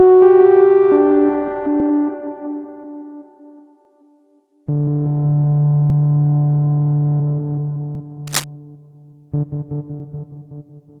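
Overlapping chunks at 1.80, 3.85, 5.90, 7.95 and 10.00 s affect this recording of everyday sound. At each join, about 50 ms of audio plays twice because every 2 s chunk begins before the previous one finishes, giving a regular stutter-like click. Cable scratch noise runs from 8.27 to 8.44 s as a dense, uneven rustle only slightly quieter than the sound itself. Its likely cause is a worn cable or connector being moved, with contact resistance fluctuating rapidly. All of this passed through a call codec path whose band limit near 12 kHz points to Opus.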